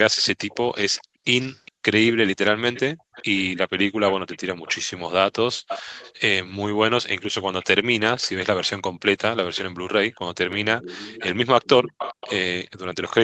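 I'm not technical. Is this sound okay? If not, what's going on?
No. The far end was most likely playing the call on a loudspeaker, and its echo canceller let some of that sound back into the microphone. This is an echo leak: a copy of the speech trails about 0.4 seconds behind, at 0.48 to 1.72, 2.35 to 4.82, 5.68 to 6.13, 7.61 to 8.69 and 9.55 to 13.13 seconds.

The echo canceller also turned the microphone down sharply while the loudspeaker played. This is background gated by the echo canceller: the room sound briefly drops away, almost to silence, then comes back, between 1.04 and 1.84 seconds and again from 5.55 to 5.68 seconds.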